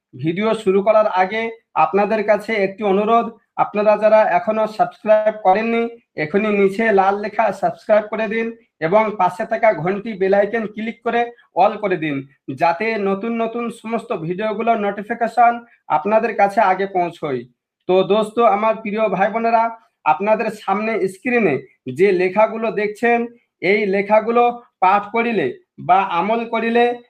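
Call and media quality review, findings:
Call audio freeze, 5.13–5.39 s. Symptom: the sound stalls into a fading buzzy continuation and never drops to silence. Probable component: network/jitter buffer, likely packets held in transit until the buffer ran dry. Mechanism: the receiver stretched the last sound for about 121 ms, then resumed where it stopped. Nothing was lost, but the playout delay grew by 121 ms. Spectrogram: the last spectral shape is smeared horizontally and fades in energy before normal structure returns.

Short concealed packet loss, 5.49–5.55 s. Symptom: a brief smear or wobble just after the freeze. Component: decoder packet-loss concealment. Mechanism: about 40 ms of audio never arrived in time. The decoder synthesised about 38 ms by extending the preceding sound, then crossfaded back into the real stream. Spectrogram: a short stretch of overly uniform, blurred harmonics or noise. 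Waveform: a slightly too-regular segment with a soft join at each end.

Call bitrate drop, 5.72–11.95 s. Symptom: rougher, grainier, watery texture across this span. Component: congestion control feeding the Opus encoder. Mechanism: the bandwidth estimate fell and the target rate was cut from 32 to 17 kbps, staying at the floor for about 5.5 s. Coarser quantisation leaves less detail per frame. Spectrogram: patchier, blockier upper bands with holes and smeared fine detail, compared with the 12 kHz-wide 32 kbps sections on either side.

Jitter buffer speed-up, 10.08–11.94 s. Symptom: the audio runs hurried with pitch unchanged, overlapping the tail of the low-bitrate span. Component: jitter buffer time-compression, draining excess buffered audio. Mechanism: short pitch-period chunks were repeatedly excised, roughly 150 ms in total, giving about 107% playback speed. Waveform: events arrive closer together than their natural spacing. 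Spectrogram: harmonics keep the same frequency, but segments are slightly compressed in time, with occasional tiny discontinuities at the splice points.

Sound cut by the noise suppressor, 15.61–15.76 s. Symptom: a sustained or decaying portion sinks in level and dies early. Component: noise suppression stage. Mechanism: the suppressor misclassified about 150 ms of wanted sound as noise and attenuated it, by about 9 dB at the deepest point. Waveform: the envelope dips or truncates abruptly rather than tapering naturally. Spectrogram: energy in those frames is visibly thinned, with the decay tail chopped rather than fading smoothly.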